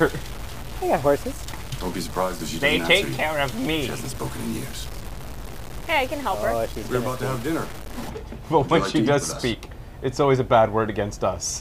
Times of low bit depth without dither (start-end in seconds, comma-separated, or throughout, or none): 0.00-8.09